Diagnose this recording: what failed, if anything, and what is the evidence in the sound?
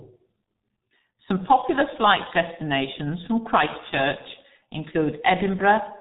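Codec stage: the G.723.1 codec degrades the speech throughout, with nothing above 4 kHz, heavy hoarseness, and consonants smeared by slow 30 ms frame updates, fitting a roughly 6 kbit/s rate. Simple band-limiting alone would leave consonants crisp.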